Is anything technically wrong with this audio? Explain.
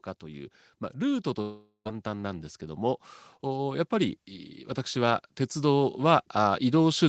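Yes. From 0.21 s to 4.24 s there is automatic gain rising: the gain control judged the input too quiet and raised its gain by about 6 dB, so the speech and the background noise swell together across those four seconds. It rises again from 4.92 s to the end.

From 1.41 s to 1.87 s there is a long network dropout, likely from packets failing to arrive. The receiver stretches the last sound into a fading buzz, then a short silence, and about 0.44 s of speech is simply missing when the audio returns.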